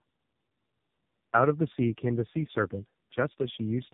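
Tandem speech coding runs throughout. Two speech coders in series, fitting G.729A then AMR-NB, leave it rough, warbly and muffled, with nothing above 3.8 kHz.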